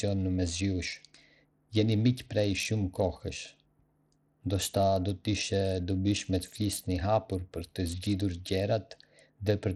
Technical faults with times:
0.00-9.76 Bluetooth SBC compression

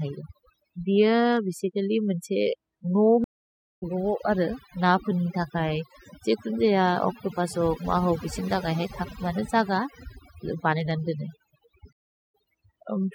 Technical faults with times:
0.00-13.14 mains hum
0.00-13.14 overdone noise removal
3.24-3.83 stream reconnect
11.93-12.34 stream reconnect

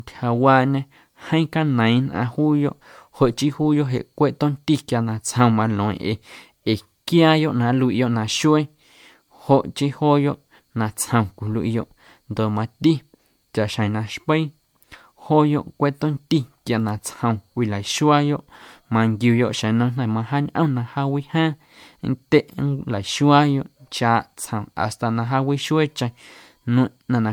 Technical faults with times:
0.00-27.32 generation loss

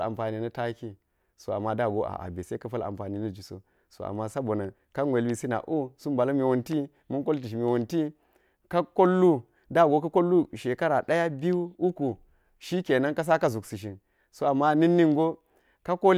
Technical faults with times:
none

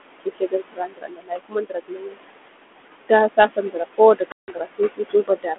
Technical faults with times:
0.00-5.58 overdone noise removal
0.00-5.58 noise suppressor artifacts
0.20-2.18 speech cut by the noise suppressor
2.80-5.58 speech cut by the noise suppressor
4.32-4.62 packet loss on an ADPCM call

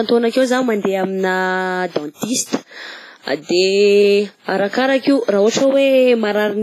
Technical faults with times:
0.00-6.62 WMA compression

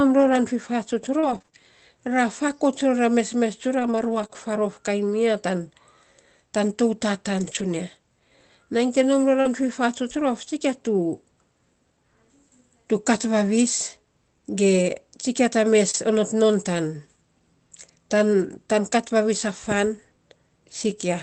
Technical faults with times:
1.19-4.31 scattered short gaps
7.39-7.65 lost packet rebuilt from error correction
9.41-9.47 short concealed packet loss
9.45-9.47 lost packet rebuilt from error correction
15.91-15.95 short concealed packet loss
15.93-15.95 lost packet rebuilt from error correction

